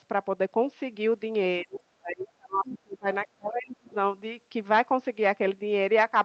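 From 1.63 to 1.83 s, 1.99 to 3.07 s and 3.25 to 3.86 s the speech drops sharply, by roughly 25, 35 and 30 dB. This is speech suppressed in double talk, likely an echo canceller turning the talker down while the far end also speaks. On the waveform these show as abrupt troughs, and the spectrogram thins to faint traces.

At 2.65 s and again at 3.86 s, short scraps of the other side's voice leaking through appear. They sit about 20 and 30 dB below the speech and are likely residual loudspeaker echo. They show up as weak, brief smudges in the spectrogram, all beneath the 8 kHz ceiling left by the Opus call path.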